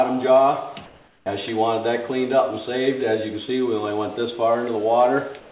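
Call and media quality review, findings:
Comfort noise in place of the background, 0.86–1.26 s and 5.40–5.51 s: steady hiss, about 5 dB then about 2 dB quieter; likely discontinuous-transmission pause fill. Unlike a dropout, never fully silent.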